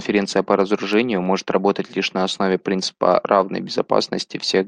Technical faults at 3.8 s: none

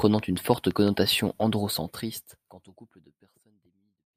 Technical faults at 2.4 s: none

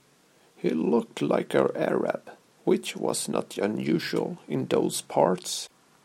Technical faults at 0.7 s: none

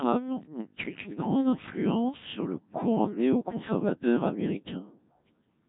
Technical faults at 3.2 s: Codec 2 vocoder

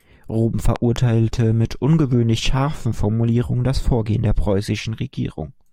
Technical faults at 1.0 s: loud pop

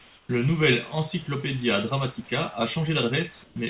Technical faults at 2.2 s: none

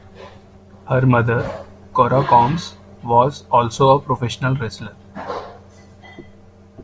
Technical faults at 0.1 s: none

